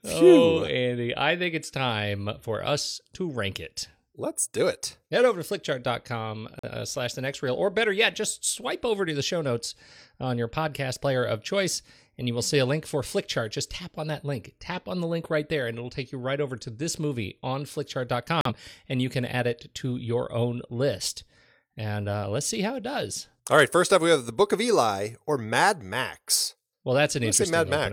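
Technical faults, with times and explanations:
6.59–6.69 s and 18.41–18.51 s, digital broadcast dropout: the speech cuts to silence for about 0.1 s each time, resuming at "slash the next reel" and "and you can add". The receiver muted after losing what sounds like a single frame, so that audio is gone.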